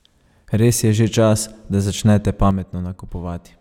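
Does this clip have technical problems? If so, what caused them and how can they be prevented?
Yes. At 2.51 s, a sudden gain jump, likely a gain change applied without a ramp, drops speech and background noise together by about 7 dB until the end. Ramping any gain change over a few milliseconds prevents the step.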